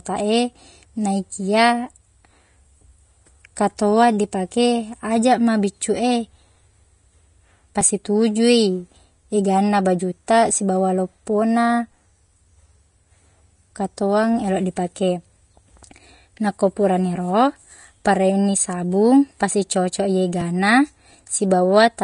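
Throughout, the treble is plainly grainy and hissy, likely from Vorbis compression at a low bitrate near 32 kbps; a spectrogram shows nothing above 10.6 kHz.

At 20.41 s a likely dropped buffer (overrun) removes about 10 ms, so the sound jumps ahead, and the waveform shows an abrupt join with no gap.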